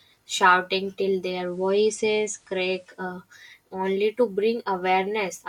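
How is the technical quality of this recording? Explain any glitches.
The recording has one clear glitch: the speech briefly drops into a hissier quality before returning to full clarity.

From 1.22 s to 3.17 s, digital radio blending to analogue occurs. The receiver lost its digital stream and cross-faded, over about 0.41 s at each end, to the station's FM broadcast. FM carries nothing above 15 kHz, and a faint hiss appears, roughly 40 dB below the speech. On a spectrogram, the band above 15 kHz goes dark and a raised noise floor fills the gaps. The waveform's level stays unchanged.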